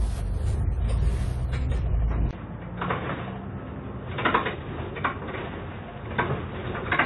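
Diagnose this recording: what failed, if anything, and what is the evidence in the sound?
The codec stage shows damage throughout, most likely AAC compression. From the start the band stops at 11.5 kHz, and plainly audible smearing and fizzy, warbling texture sit on sustained and noisy parts of the sound. That fits AAC-LC at a low bitrate, around 32 kbps, where the encoder starves upper bands and fills or drops them. Because the damage is present from the first moment and never changes, it points to encoding rather than a capture-side event.

At 2.31 s the audio changes abruptly, with about 20 ms of silence at the joint, and stays changed to the end. The band narrows to nothing above 3.8 kHz, the level falls by about 5 dB, and a new background noise appears, roughly 35 dB under the signal. This points to the input switched to a poorer device at the driver or device stage, likely a headset call profile or second microphone. 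A codec bitrate drop would not bring the gap, the level step, or a fresh noise floor.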